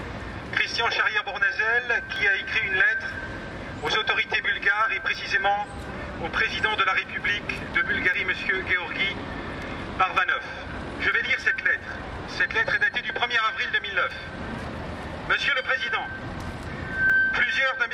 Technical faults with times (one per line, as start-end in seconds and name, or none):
2.16 audio missing between chunks
5.15 audio missing between chunks
8.14 audio missing between chunks
11.12 audio missing between chunks
14.11 audio missing between chunks
17.10 audio missing between chunks